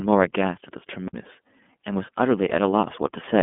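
From the first moment the speech sounds thin, boxed-in and faintly synthetic, with a slightly rough, buzzy texture that is plainly audible. Nothing reaches above about 3.7 kHz, and the sound sits in a telephone band of roughly 200 Hz to 3.5 kHz. This is iLBC codec damage. The narrowband VoIP coder rebuilds each 30 ms frame's excitation on its own, without relying on the previous frame, and the result fits its 13.33 kbps mode.

At 1.08 s a near-instant dropout lasting only a few milliseconds occurs, and the speech then resumes from a different point, so the flow of sound suddenly jumps. This is a CD skip. A knock or a flaw in the disc threw the laser onto another turn of the spiral. The player muted briefly and picked up playback at a displaced position.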